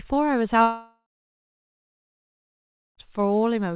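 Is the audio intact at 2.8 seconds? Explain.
No. At 2.8 s the sound sits inside a long network dropout from 0.62 to 2.99 s, likely lost packets. The receiver stretched the last sound into a fading buzz or hiss, then silence. The waveform is flat there, and the spectrogram is blank below its 4 kHz ceiling.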